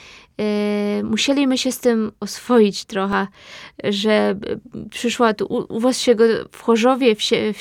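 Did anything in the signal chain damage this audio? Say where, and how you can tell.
Yes. A block of digital silence at 3.13 s, just after "się z tym oswoić", points to the driver or buffer stage. The speech drops to silence for about 1 ms and then resumes, with no fade on either side. The abrupt step down and back up puts a discontinuity at each edge. Because the gap is so short, the two edges merge into a single tick rather than an audible hole.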